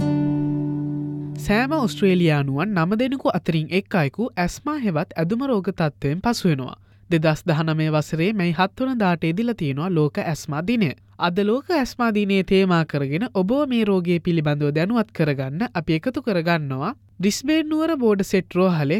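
Nothing stood out as a technical fault on listening.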